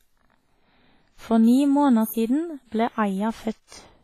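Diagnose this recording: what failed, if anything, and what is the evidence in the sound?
The speech rings and smears throughout, with a washy, breathing hiss that swells and fades with the signal and no content above 15 kHz. This is heavy damage at the codec stage, likely WMA compression: long transform blocks spread quantisation noise across tens of milliseconds, and weak components are zeroed, which fits a bitrate around 24 kbps.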